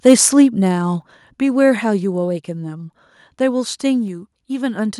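A speech clip with two level faults at its start. From 0.06 to 0.13 s there is microphone overload: the peaks sit flat against the converter's limit, about 3 dB over, and a small fraction of samples is clipped. The waveform shows squared-off tops, and a spectrogram shows broadband smearing. This is likely an input gain set too high. At 1.02 s the microphone volume is stepped down: voice and background fall together by about 5 dB in a single abrupt step, visible as a sudden narrowing of the waveform envelope and a uniformly dimmer spectrogram. The likely cause is call software cutting the device's input volume in response to the earlier overload.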